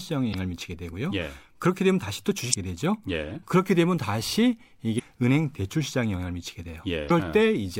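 Damaged data in a compressed stream makes the decoder lose sync briefly, giving short glitches in the speech at 0.30–0.35, 2.50–2.55, 4.95–5.00 and 7.07–7.11 s.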